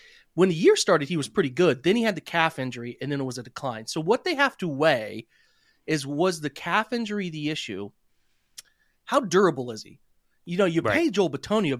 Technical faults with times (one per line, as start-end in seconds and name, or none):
none